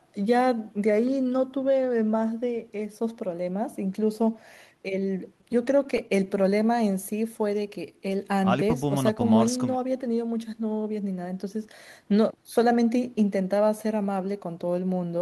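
Between 5.41 and 6.54 s the speech shows scattered short gaps: around ten packets arrived late or not at all, each hole no longer than roughly 10 ms. The receiver filled each one by extending the preceding sound, covering about 70 ms in total, or roughly 7% of that stretch. The speech stays intelligible, but brief ticks, slight smearing and small hiccups break up its flow, and the patching leaves the audio running about 5 ms behind afterwards.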